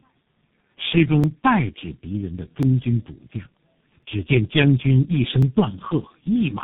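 From the very start and right through the clip, the speech has that layered, chewed-over quality of tandem speech coding. The call seems to have been decoded and re-encoded at each hop, with every coder working on the previous one's mangled output. The result is rougher, duller and more warbly than any single codec would give. Nothing comes through above 3.8 kHz, and the texture fits about three low-rate speech coders in a row, the last one sounding like G.723.1.

Between 1.24 s and 5.43 s there's a second problem: a short click or pop every 1.4 s, about four of them in all, as regular as a metronome. That steady spacing is the giveaway for clock drift buffer slips. Two devices are likely running on slightly mismatched clocks, something around 700 ppm apart. The buffer between them creeps until it has to drop or repeat a block, which sounds like about fifty samples each time, and every one of those jumps is heard as a tick.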